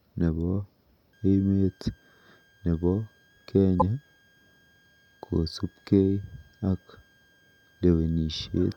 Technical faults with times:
1.13-8.77 switching supply whistle
3.78-3.82 damaged data in a compressed stream

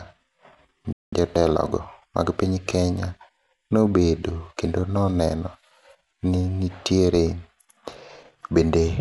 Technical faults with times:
0.00-9.00 Bluetooth LC3 compression
0.93-1.13 playback stall
1.13-2.43 time-compressed catch-up

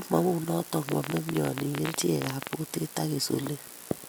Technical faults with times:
0.89-2.54 train of clicks

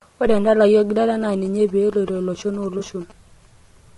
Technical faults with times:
0.00-3.97 low-delay AAC compression
1.13-3.12 GSM signalling bursts
2.79-2.83 AAC frame loss with concealment

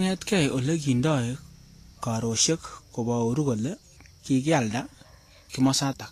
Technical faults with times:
0.00-6.11 Vorbis compression

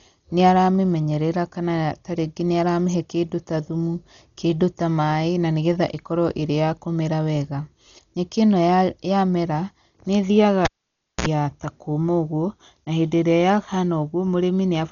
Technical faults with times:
0.00-14.91 Dolby Digital compression
10.65-11.26 cable pulled and plugged in

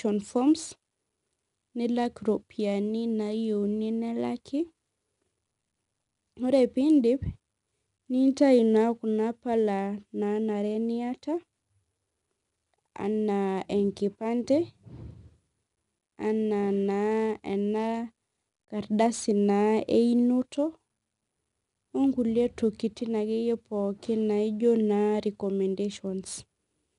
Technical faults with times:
0.00-26.98 4-bit ADPCM compression

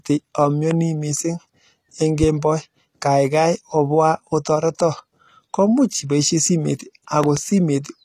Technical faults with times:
0.00-8.04 HE-AAC compression
0.71-0.74 loud pop
7.24-7.39 loud pop

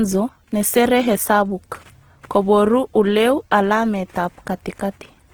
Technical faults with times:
0.00-5.34 Opus compression

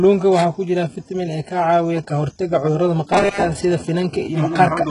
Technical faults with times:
0.00-4.91 HE-AAC compression
3.13-3.43 robotic sound from repeated short buffers

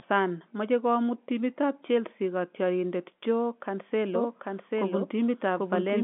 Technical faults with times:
4.15-6.03 doubled audio track

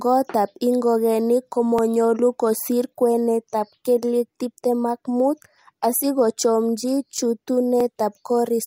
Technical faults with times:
1.79 overlapping chunks
7.80 overlapping chunks

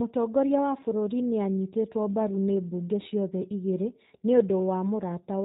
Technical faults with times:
0.00-5.44 G.729 codec

